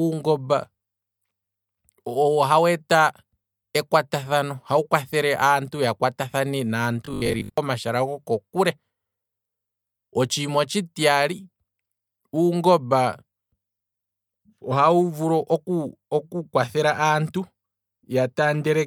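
From 7.06 to 7.58 s, between "ya kwata thane" and "goko kule", the speech turns into a rigid metallic buzz at 50 Hz, robotic sound from repeated short buffers. About half the audio is replaced, likely by repeating a 20 ms buffer while new data arrives late.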